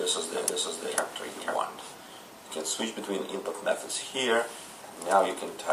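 A doubled audio track runs from the start to 1.56 s: a full-band copy trails about half a second behind at roughly equal level, likely from a second, slower capture path, then cuts off abruptly.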